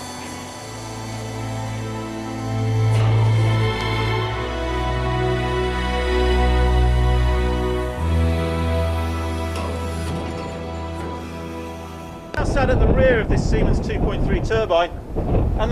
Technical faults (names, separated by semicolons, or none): loud pop